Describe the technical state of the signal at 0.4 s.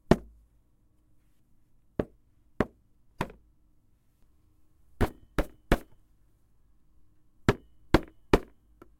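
At 0.4 s the audio is intact, with no dropout, distortion or other technical fault audible at that point.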